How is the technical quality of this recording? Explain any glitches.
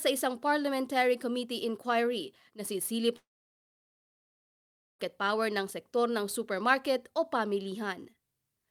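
The recording has one clear glitch, a long network dropout. From 3.16 to 5.00 s, right after "committee inquiry na sisilip", the speech cuts out. There's a brief fading buzz, then about 1.76 s of silence before it resumes at "power ng sektor ng". That's likely the receiver concealing audio that never arrived, so about 1.8 s of speech is simply gone.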